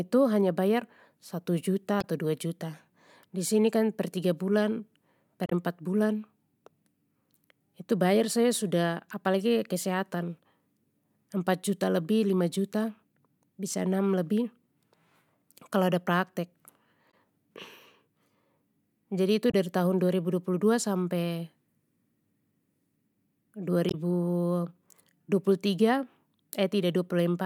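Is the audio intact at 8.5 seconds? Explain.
Yes, the audio at 8.5 seconds is intact, with no dropout, click, distortion or other fault to be heard at that moment.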